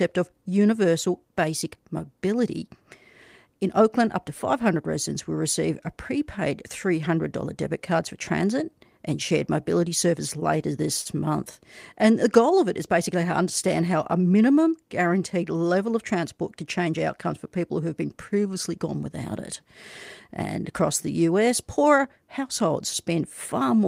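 A late packet left the jitter buffer empty at about 11.01 s in this speech recording, causing a short stall: the receiver held the last sound for about 39 ms until the data arrived, then carried on from the same point. Nothing is lost, but from 11.01 to 11.07 s a sound is drawn out slightly, with a faint buzz or dip, and playback then sits 39 ms later than before. A jitter buffer speed-up follows from 14.19 to 14.42 s. The buffer had built up more audio than its target, so the receiver trimmed a series of short pitch-period pieces to shrink it, removing roughly 40 ms in total. The speech runs at about 113% speed at unchanged pitch and sounds briefly rushed.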